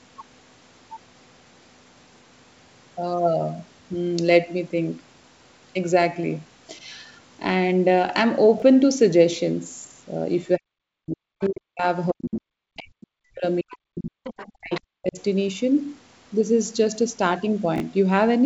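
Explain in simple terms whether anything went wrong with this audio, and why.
Yes, a few things went wrong. First are two chunks out of order, at 8.58 to 8.62 s and 17.76 to 17.8 s. In each spot a 20 ms slice of audio turns up one slot late, so the speech briefly sounds jumbled.

Next is speech suppressed in double talk, at 10.58 to 11.84 s, 12.11 to 13.44 s, 13.61 to 14.23 s and 14.57 to 15.18 s. The talker's voice dips sharply, at worst nearly to silence, likely because the echo canceller got confused while both sides talked and turned everything down.

Alongside that you get the other side's voice leaking through, in short scraps at about 11.43, 13.69 and 14.74 s, plus a longer one from 14.24 to 14.52 s. The last two are noticeably louder. It's likely the far end's voice coming off the loudspeaker, which the echo canceller didn't fully remove.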